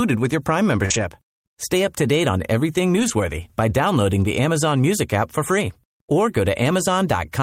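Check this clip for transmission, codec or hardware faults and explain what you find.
Two kinds of network fault are present in this speech clip: one burst of packet loss and two stretches rebuilt from error correction.

From 0.85 to 0.92 s there is a burst of packet loss. The receiver extends the last sound for about 46 ms as a fading buzz or hiss, then resumes roughly 40 ms further on with that stretch missing. The fade and the jump ahead mark it as concealment rather than a repair.

From 0.90 to 1.04 s, overlapping the end of that burst, and again from 2.96 to 3.10 s, between "to date on everything" and "by downloading the", there are lost packets rebuilt from error correction. Each run rebuilds about 80 ms and fits several lost packets whose low-bitrate copies rode in the following packets. The speech continues without a gap, but it sounds rougher and noisier. Because nothing is skipped or faded, these are repairs, not concealment.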